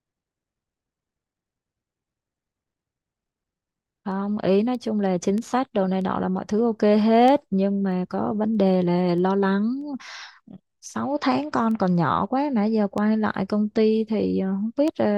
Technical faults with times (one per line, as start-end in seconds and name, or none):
0.31-14.88 word clock ticks